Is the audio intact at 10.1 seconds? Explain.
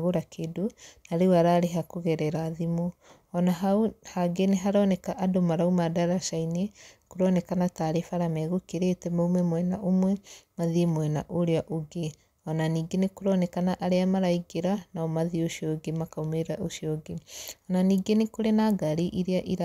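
Yes, at 10.1 s the speech plays through cleanly, with no dropout, click, distortion or other fault audible at that moment.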